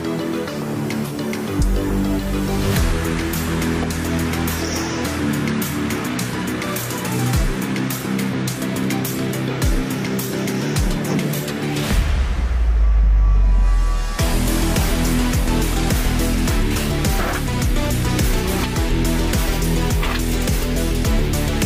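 No technical faults can be heard anywhere in this audio.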